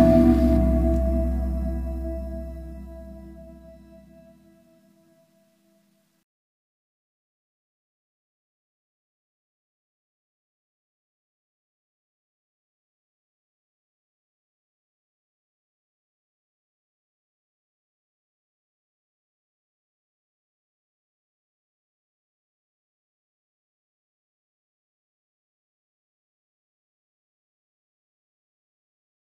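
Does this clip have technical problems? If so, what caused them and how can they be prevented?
No, nothing stood out on listening, so there is nothing here that calls for a cause or a preventive step.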